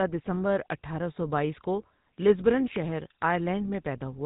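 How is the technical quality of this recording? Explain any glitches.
The quality is clearly degraded: the whole recording has passed through the GSM full-rate codec, and the damage is plainly audible from start to finish. The rough, bandwidth-limited character fits a 13 kbps stream. This codec models the speech with a vocal-tract filter and drives that filter with a sparse train of evenly spaced excitation pulses, keeping only a third of the excitation samples. That coarse excitation gives the speech a buzzy, gravelly roughness. On a spectrogram, all energy stops at a hard ceiling of 4 kHz, and the harmonics below it look smeared and grainy rather than cleanly striated.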